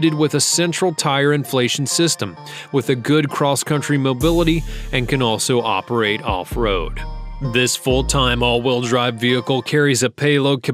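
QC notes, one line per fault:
Throughout: sample clock jitter, an unsteady converter clock of roughly 0.4 microseconds mistiming samples, adding faint hiss and roughness on loud, bright passages, about 45 dB down.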